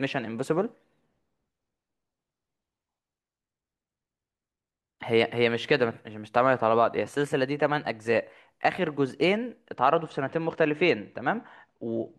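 From 9.75 s to the end at 12.18 s, one channel lags the other by a couple of samples, only a few hundredths of a millisecond, and the mono sum cancels what they share. This channel delay (comb filtering) puts the first notch near 10 kHz, dulling the speech's top end.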